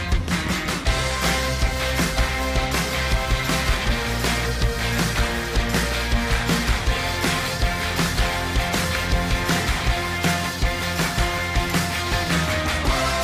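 Nothing stood out as a technical problem on listening to this audio.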